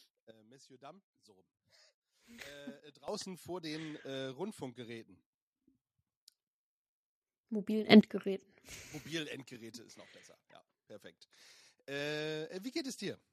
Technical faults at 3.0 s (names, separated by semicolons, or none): sudden gain jump